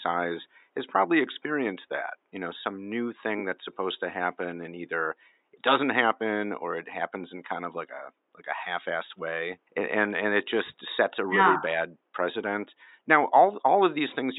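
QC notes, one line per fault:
No system faults found; the only background is the room's own noise, sitting about 51 dB below the speech.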